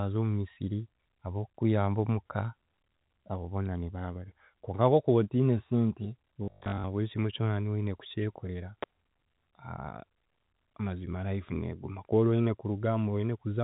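From 6.44 s to 6.84 s there is packet loss with the last packet repeated. About 300 ms of audio drops out across that 400 ms span. The longest gap runs 120 ms. Instead of silence, the receiver replays the previous packet. The runs buzz at a steady rate, which points to 20 ms packets. The speech becomes a brief robotic stutter.

At 8.83 s a sharp snap sits on top of the speech. It is a tight, very short burst of clicks, lasting about 11 ms. It has nothing to do with the speech itself. This is likely an electrical switching spike: a nearby switch, motor or static discharge arcing, with the audio line picking up the pulse.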